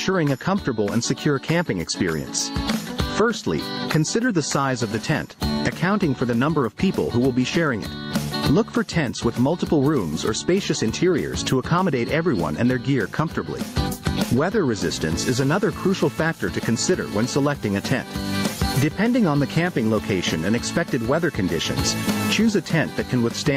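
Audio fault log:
Throughout: gain pumping. The level drops sharply under each loud sound, swinging by roughly 20 dB, so the level seems to breathe in and out. Loud and quiet passages sit unnaturally close together, giving a flattened, squashed sound. This is likely caused by input gain set far too high for the microphone, with a fast limiter or compressor pulling it down on each peak and releasing it in the pauses.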